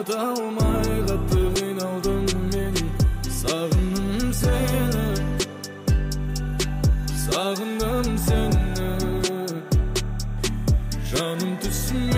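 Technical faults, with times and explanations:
Throughout, timecode bleed: a faint, steady chirping warble sits behind the sound, a buzzy alternation of tones around 1 kHz and 2 kHz, roughly 35 dB below the programme. It comes from linear timecode leaking in from a neighbouring track or cable. The code is a square wave whose bits are marked by switching between those two pitches, and its pattern repeats with every frame, 30 times a second, which gives the warble its regular, ticking texture.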